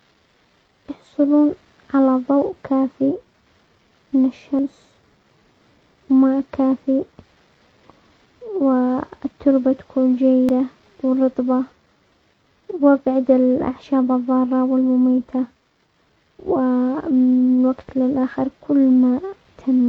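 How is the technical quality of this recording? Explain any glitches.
The recording has three short skips, at 4.59, 10.49 and 16.39 s, each losing about a tenth of a second. This is audio missing between chunks, likely from a recorder working in 6-second blocks and dropping a piece at each handover. Unlike a dropout, no silent gap remains; the sound jumps straight ahead.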